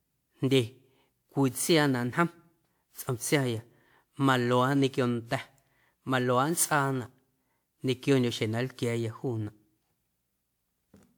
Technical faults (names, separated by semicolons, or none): generation loss